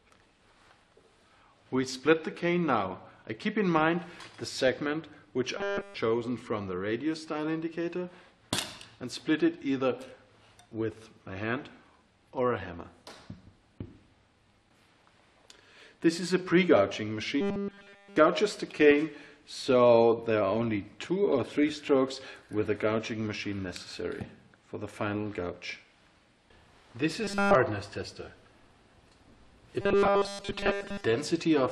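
Robotic sound from repeated short buffers appears four times: 5.57 to 5.95 s, 17.41 to 18.16 s, 27.24 to 27.55 s, and 29.81 to 31.04 s. The sound turns into a rigid, metallic buzz at 200 Hz. The first three stretches are almost entirely buzz. The last is mostly buzz. The likely cause is audio arriving too seldom, so a tiny chunk, about 5 ms, is looped while real audio is skipped.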